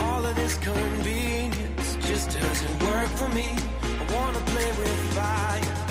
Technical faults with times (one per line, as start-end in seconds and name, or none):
none